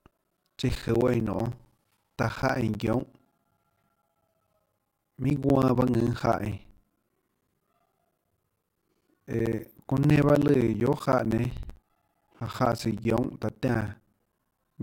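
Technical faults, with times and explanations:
0.11 to 14.78 s, periodic USB or driver dropouts: the audio path stalls every 64 ms, replacing about 10 ms with silence, heard as steady ticks through the speech.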